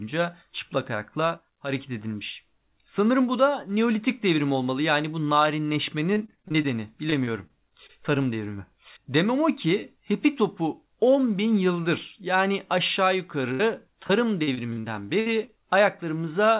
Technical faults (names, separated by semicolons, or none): loudspeaker feedback squeal; repeated packet loss (robotic sound); burst of packet loss